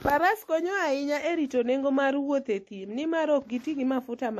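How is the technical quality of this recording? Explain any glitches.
The quality is degraded throughout by layered compression damage. From start to end, the speech has swirly, smeared artefacts of more than one flavour, likely from transcoding between lossy codecs, something like WMA re-encoded as a low-bitrate MP3. A spectrogram would show a hard ceiling at 13.9 kHz.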